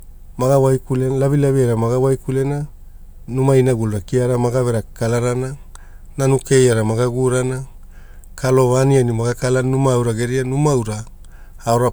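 No technical faults can be heard anywhere in this speech recording. Nothing in the audio breaks, stalls or changes character at any point.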